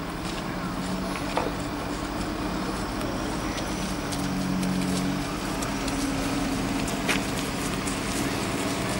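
Two devices likely running on separate clocks, drifting apart by roughly 300 ppm, cause clock drift buffer slips: every 0.6 s a few samples are dropped or repeated. From 0.16 s to 8.56 s this yields about fifteen evenly spaced clicks in the sound.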